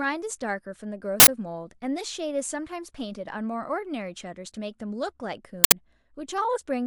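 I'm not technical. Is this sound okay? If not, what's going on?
No. An uninitialised buffer causes harsh bursts of digital noise at 1.2 s and again at 5.64 s, each lasting 80 ms. In both cases the player sent out a block of audio before any speech had been written into it, so leftover junk from memory was played instead.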